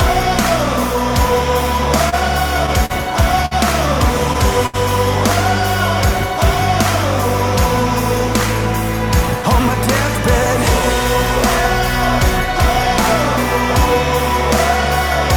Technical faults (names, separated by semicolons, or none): repeated stalls (stutter); short stall from a late packet